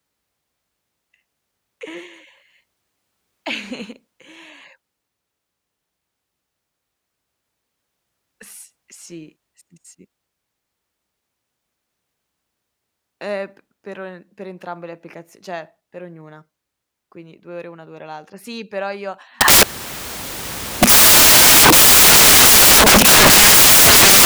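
At 19.41 s the speech collapses into loud, harsh broadband noise that runs to the very end: samples built from the wrong bytes. The reader is assembling each sample with its bytes misaligned or swapped, so the jittery low bits dominate.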